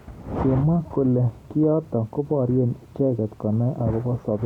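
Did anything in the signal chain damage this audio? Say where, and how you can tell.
No, nothing in the signal chain damaged this audio.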